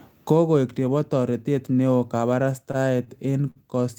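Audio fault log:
2.71–3.58 s, repeated stalls (stutter): the speech catches five times, with about 121 ms of filler in all and the longest hold near 52 ms. Packets reached the receiver late, so its jitter buffer kept running dry, and each time the last sound was stretched to cover the wait. No speech is lost, but the delivery drags. On a spectrogram, short smeared or frozen bands interrupt the normal patterns; on the waveform, brief repeated or tapering stretches appear.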